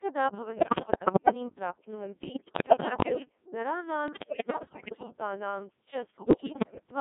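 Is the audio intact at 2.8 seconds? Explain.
No. From 2.24 to 3.29 s the voice bursts into bleeps, warbles and robotic gibberish, lurching in pitch, level and tone colour. These are bit errors on digital voice radio: at a high error rate, roughly one bit in seven, corrupted bits each reset the pitch, level, voicing or spectrum of an entire synthesised frame.

Underneath, the voice is buzzy and robotic, confined to roughly 150 Hz to 3.7 kHz. This is heavy Codec 2 vocoder damage. The decoder rebuilds speech from sine waves using only sent pitch, voicing, energy and envelope, which fits a rate around 1.6 kbit/s.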